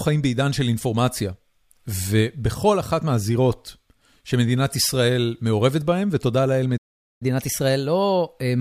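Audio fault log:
6.77–7.22 s, playback stall: the speech cuts out for about 435 ms, most likely the player running dry or its thread getting blocked, then resumes.
7.22–8.60 s, catch-up at higher speed: speech runs 1.1x fast and sits roughly a semitone and a half sharp, the player resampling to work off its backlog.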